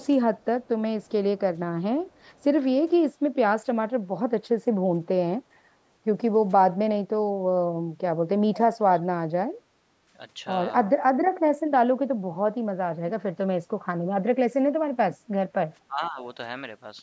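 Speech recorded through a call path, with the bandwidth topping out at 8 kHz from the microphone processing, carries short echo leak bursts at 0.37, 0.64, 1.03 and 8.54 s, at 15.71 s, and a longer stretch from 2.02 to 2.44 s. Each is a copy of speech delayed by about 464 ms, very faint early on and much louder at 8.54 s, likely from a far-end echo canceller passing loudspeaker pickup back. From 15.87 to 16.20 s, speech is suppressed in double talk: the talker's level dips by around 20 dB in pieces, likely because the canceller ducked both sides during overlapping talk.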